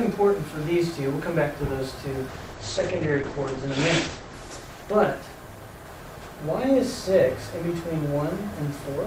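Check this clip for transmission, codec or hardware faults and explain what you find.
There is one fault, a call bitrate drop, from 2.28 s to about 8.15 s. The link's bandwidth estimate fell and the encoder was forced onto far fewer bits, consistent with a fall from around 64 kbps to near 9 kbps. Coding becomes coarse and the audio band narrows from 20 kHz to 8 kHz, so the sound turns muffled and rough, worst for about 1.06 s at the lowest rate, before clarity returns.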